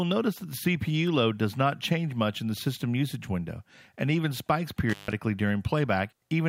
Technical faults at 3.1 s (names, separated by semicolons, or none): none